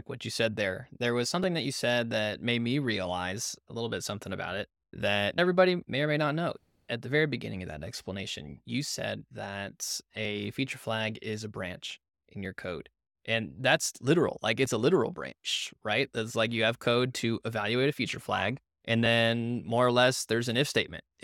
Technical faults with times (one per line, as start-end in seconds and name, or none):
1.44-19.06 clock drift buffer slips